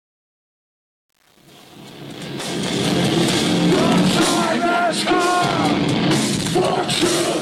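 From 0.0 to 2.87 s the fade-in shows truncation distortion on a fade. The gain stage drops low-order bits without dither, which fits a 7-bit word, so the rising level steps coarsely. Until 2.57 s the sound is gritty.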